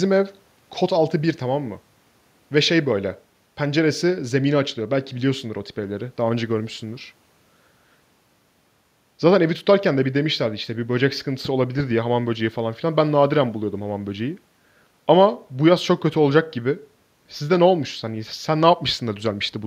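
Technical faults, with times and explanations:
No technical faults are audible in this speech recording; the signal stays continuous and intact throughout.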